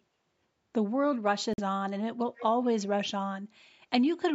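Packets likely failed to reach the headphones in time, a Bluetooth dropout, cutting the speech to silence from 1.53 to 1.60 s, about 46 ms lost, consistent with two missing frames. From 2.37 to 2.45 s, an echo leak, likely from a loudspeaker-side canceller missing some pickup, adds a faint copy trailing the speech by 142 ms, well below it in level.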